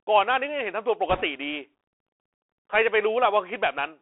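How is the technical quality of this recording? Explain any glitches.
The technical quality is poor. The whole clip passes through a narrowband headset link, and one short stretch is damaged further.

The Bluetooth CVSD headset codec is present from start to finish. The speech sits in a telephone band, from about 300 Hz to 3.4 kHz, with nothing above. That fits a 64 kbit/s CVSD link. This codec sends one bit per sample, saying only up or down, with an adaptive step size. Fast, loud high-frequency sounds outrun that step. So s sounds turn scratchy and a grainy hiss sits under the voice. The damage is plainly audible.

Bit errors on a Bluetooth voice link occur from 1.09 to 1.23 s. Bits in the one-bit stream were flipped, at a rate of a few percent. Each bit carries only a small step, and its effect fades quickly. So there are no sharp clicks. Instead, that stretch of speech picks up a rushing, crackly noise layered over the sound. 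It lasts about 0.13 s and then stops.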